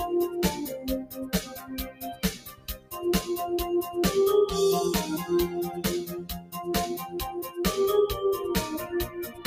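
A noise suppressor built for speech runs through the whole clip. It mistakes steady parts of the sound for noise. Its gain swings by around 10 dB. Onsets pass, but sustained parts and tails drop away. The result pumps and thins.

The sound is cut by the noise suppressor at several points. From 1.43 to 1.71 s, the sound sinks by about 9 dB. From 1.88 to 2.93 s, the longest cut comes, about 14 dB deep. The sound fades as if pulled under. From 6.40 to 6.55 s there is a brief dip of about 11 dB. From 9.08 s to the end, the sound is cut, down about 10 dB. Each time, the steady or fading material is treated as noise.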